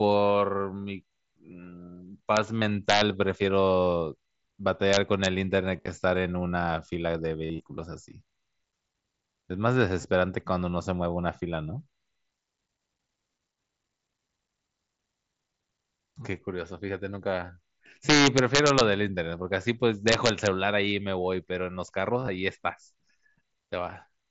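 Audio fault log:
2.37 s, 2.90–3.01 s, 4.93–5.26 s, 18.10–18.81 s, 20.08–20.47 s, integer overflow: harsh violent cracks on loud peaks, far sharper than clipping, as samples pushed up to about 4 dB past the integer limit wrap to the opposite sign.
2.60 s, 5.76–5.87 s, 7.45–7.60 s, 10.02 s, 22.20–22.28 s, concealed Bluetooth headset packet loss: brief buzzy held tones with a slight warble on recovery, as lost headset packets in scattered runs up to 45 ms are patched by repeating recent waveform.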